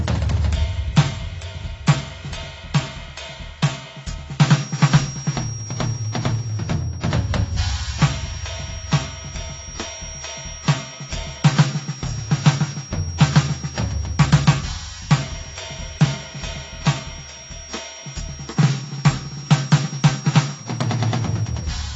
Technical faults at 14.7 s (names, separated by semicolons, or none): AAC compression; feedback whistle